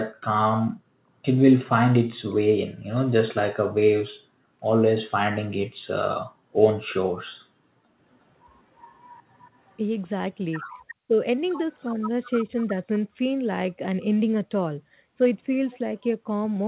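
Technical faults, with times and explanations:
8.79–9.73 s, 10.59–10.95 s and 11.72–11.91 s, echo leak: A faint, delayed copy of the speech trails the talker, lagging by about 363 ms each time. It sits well under the main speech, roughly 20 to 30 dB down, loudest in the middle burst. The likely cause is a far-end loudspeaker feeding its microphone, with the echo canceller failing to remove all of it. The leftover was sent back, so the talker hears themselves late.
11.05–11.19 s, speech suppressed in double talk: The speech drops out in a short hole of about 150 ms, falling as much as about 40 dB at its deepest. This comes just after the second echo burst, while both sides overlap. The likely cause is an echo canceller that could not separate its own talker from the returning echo. It clamped down on both together, so the speech gets swallowed for that moment.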